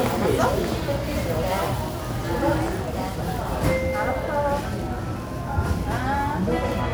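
No technical faults can be heard anywhere in the recording.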